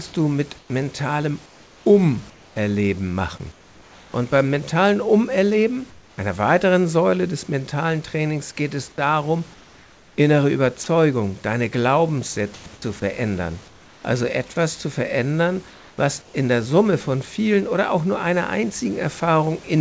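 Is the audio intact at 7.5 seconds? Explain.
Yes, the audio is intact at 7.5 seconds, with no fault at that moment.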